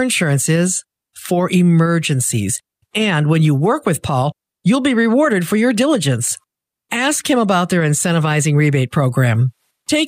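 No technical faults can be heard anywhere in this speech recording. Nothing in the audio breaks, drops out or distorts at any point.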